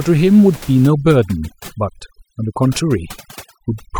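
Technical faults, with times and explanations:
0.87 to 3.99 s, overdone noise removal: a noise reducer set too strong pulls individual frequency bands down or out whenever they sit near its noise estimate, so the room noise, about 22 dB under the speech, collapses into twinkling specks, and quieter parts of the voice vanish too.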